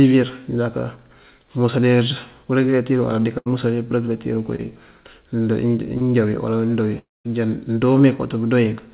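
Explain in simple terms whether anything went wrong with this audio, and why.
Yes, a few things go wrong, all of them gaps where pieces of the call didn't make it through in time.

Around 3.38 to 3.48 s there's a burst of packet loss. A chunk of roughly 80 ms never arrived, so the receiver kept stretching the last bit of sound for about 76 ms, fading it down as it went. You hear a brief held buzz or hiss in place of the real audio, then the speech picks up slightly further along with that piece gone.

There are also two cases of short concealed packet loss, one at about 4.56 s and one from 5.97 to 6.03 s, just before "wí wala wí mëndoo". These holes are tiny, about 20 ms and 40 ms of missing audio. The receiver patched each one by continuing the previous sound for around 30 ms and then blending back in. They come across as a quick smear or wobble, and a short consonant can get swallowed.

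The bigger one comes right after "wala wí mëndoo wí", from about 6.99 to 7.26 s. The sound drags on as a fading buzz or hiss and then goes quiet for a good part of that stretch, about a quarter of a second of speech lost in total. That's likely a long network dropout, where nothing arrived for a while and the receiver ran out of sound to fill in with.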